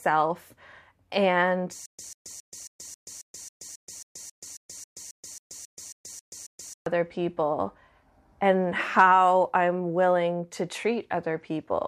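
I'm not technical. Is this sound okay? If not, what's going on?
No. From 1.86 to 6.86 s, a short 143 ms snippet of speech repeats 18 times, each followed by silence. This stutter with silent gaps likely comes from playback stalling and replaying the last piece.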